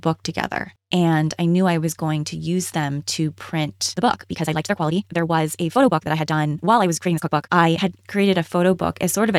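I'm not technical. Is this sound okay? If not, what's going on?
No. From about 3.89 to 7.99 seconds, right after "to use them to", there's a time-stretched section: software likely squeezed that stretch of speech to make it fit a shorter length, keeping the pitch steady by cutting out tiny slices. The result plays at roughly 1.95 times normal speed, so the talking suddenly rushes while the voice stays at the same pitch, then drops back to normal pace.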